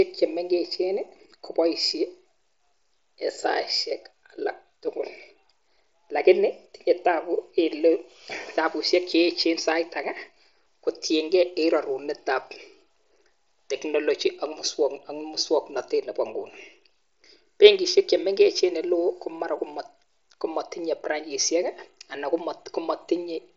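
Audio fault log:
No faults heard.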